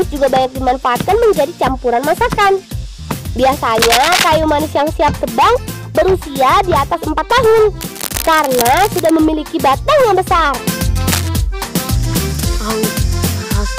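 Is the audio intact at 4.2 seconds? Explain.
No. The signal is overdriven by about 16 dB, so hard clipping cuts its peaks flat throughout, including at 4.2 seconds, adding a harsh, crackling fuzz to every loud moment. From 3.81 to 4.29 s, cable scratch noise is also present, likely from a worn cable or connector being moved and its contact resistance jumping. It sounds like a rough scratching burst, somewhat louder than the sound itself.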